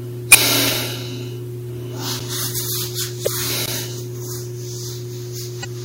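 A recording of everyday sounds with damaged data in a compressed stream at 0.30–0.35 s, 3.23–3.27 s and 5.61–5.65 s, heard as brief glitches where the decoder lost sync, showing as smeared broadband bursts on a spectrogram. Blocks of digital silence at 0.74 s (about 2 ms), 2.19 s (10 ms) and 3.66–3.68 s (20 ms) appear as flat gaps with vertical click edges, likely from the output buffer not being filled in time.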